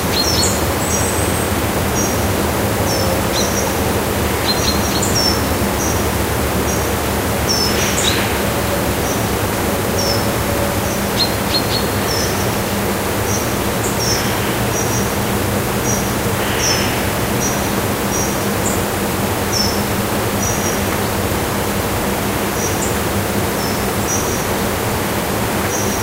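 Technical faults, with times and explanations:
18.28 s, dropped samples: a single sharp click, seen as a thin vertical line running up the whole spectrum. This is likely caused by a handful of samples, well under a millisecond, going missing, so the waveform steps straight from one value to a later one. Unlike a dropout, there is no audible gap and no sound goes missing, only the instantaneous discontinuity, which is why it registers as a click rather than a stutter or silence.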